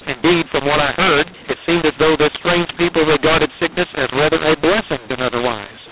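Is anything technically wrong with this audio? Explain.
Yes. Throughout the speech, mu-law and A-law are mixed up. The audio was coded with A-law but decoded as mu-law. Every sample level is mapped wrongly, so some come out too loud and others too soft. The sound is harsh and distorted. Quiet stretches fill with noise.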